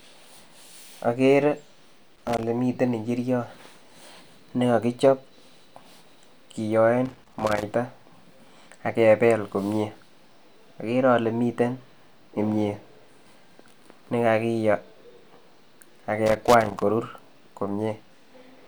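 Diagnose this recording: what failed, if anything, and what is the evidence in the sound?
The failure is in the analogue wiring: loose connector crackle. Three irregular bursts of scratchy crackle cut through the speech, at 2.16 to 2.43 s, 7.06 to 7.63 s and 16.26 to 16.82 s. The bursts last about a quarter to half a second each. A worn or dirty contact is making and breaking as the plug shifts. Each break chops the signal, and any DC on the line turns the transitions into pops.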